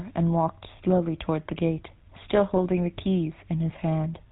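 Throughout, the speech carries the buzzy, gravelly roughness of the GSM full-rate codec, consistent with 13 kbps coding: pulse-driven excitation and nothing above 4 kHz. From 2.54 to 2.59 s, GSM bit errors corrupt the decoded filter, pitch or gain values, producing a brief squawk and gargling burst in the voice.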